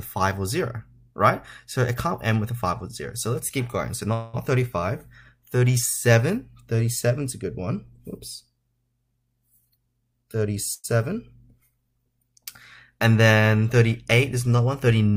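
At 4.13 s the sound stops moving forward. For about 0.2 s the last sound carries on as a fading buzz. This is a call audio freeze, likely from delayed packets emptying the jitter buffer. Playback resumes where it stopped, with nothing lost.

From 9.61 to 10.57 s there is a jitter buffer speed-up. The audio runs at about 119% speed with unchanged pitch. Roughly a fifth of a second is trimmed in small slices. It sounds hurried.

At 10.74 s a second, shorter freeze follows. It lasts about 0.1 s. The held sound fades briefly into near silence before the audio continues intact.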